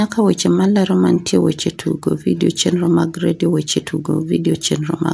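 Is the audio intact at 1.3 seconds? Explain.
No, aliasing runs throughout, including 1.3 s. Content above 11 kHz folds back as gritty, metallic sibilance roughly 25 dB down, unlike the clean dullness of simple band-limiting.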